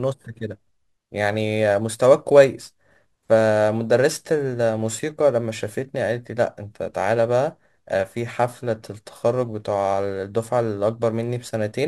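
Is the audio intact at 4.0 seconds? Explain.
No. Crude rate conversion runs through the whole clip, so 4.0 s is affected too. Samples were dropped or repeated with no filtering, which fits a 48 kHz to 44.1 kHz change. The error, roughly 30 dB below the speech, adds a gritty, inharmonic fizz.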